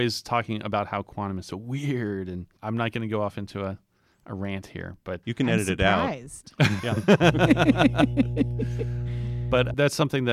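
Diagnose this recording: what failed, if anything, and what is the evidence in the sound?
The analogue wiring is the culprit here: there's mains hum from 7.23 s to 9.74 s, a steady 60 Hz tone sitting only a little below the speech level, so it's hard to miss. Because it switches in and out partway through rather than running the whole length, my bet is a ground loop or a nearby transformer mid-take, coupling the power line straight into the signal path.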